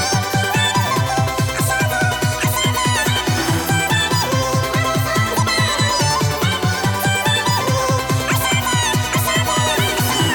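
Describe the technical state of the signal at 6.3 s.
At 6.3 s the sound runs at twice its proper speed and a full octave (12 semitones) too high. This is audio read two samples at a time (double speed), present throughout the clip. The playback reads each pair of consecutive samples as a single frame, as if the data held two channels or samples of double width, so every second sample is skipped. Halving the effective sample rate makes high frequencies fold back down as aliasing.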